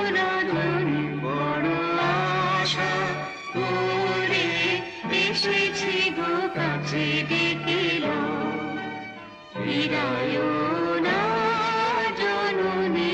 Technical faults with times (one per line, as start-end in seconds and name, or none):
5.71-6.71 GSM phone buzz